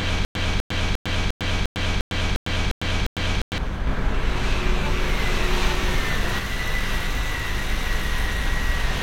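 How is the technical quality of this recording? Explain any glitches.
The technical quality is poor, with two clear glitches in this everyday-sound recording.

From 0.0 to 3.58 s, already under way at the start, there is a stutter with silent gaps. A 0.25 s burst repeats nine times every 0.35 s with 0.10 s of digital silence between. It is likely a stalled stream replaying its last fragment, and it shows as identical waveform blocks separated by flat lines.

From 3.87 to 6.39 s, a doubled audio track appears. A full-band copy at about equal level trails by about one second, with no decay, and it starts and stops abruptly. The likely cause is a second, slower capture path. On the spectrogram it looks like the same pattern shifted one second later.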